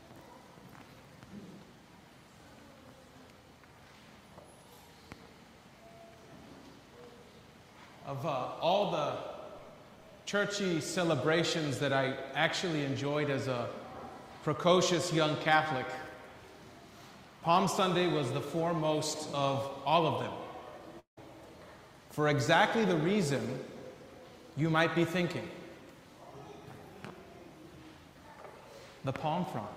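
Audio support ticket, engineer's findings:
Long network dropout, 20.99–21.19 s. Sound stops arriving and the receiver stretches the last fragment into a fading buzz for about 173 ms. Roughly 110 ms of near-silence follows. Audio then resumes with about 180 ms never played. Likely cause: a stalled packet stream with concealment running out. Spectrogram shows a smeared, repeating band decaying into an empty gap. The waveform shows a tapering envelope, then a flat line before an abrupt restart.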